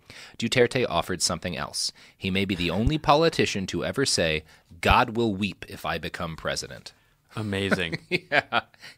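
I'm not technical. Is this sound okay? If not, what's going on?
No. There is a loud pop at 2.87 to 2.90 s, a single sharp snap that jumps well above the speech while the speech carries on underneath. It is likely a sudden electrical jolt, such as a plug, switch or static spark, briefly hitting the recording.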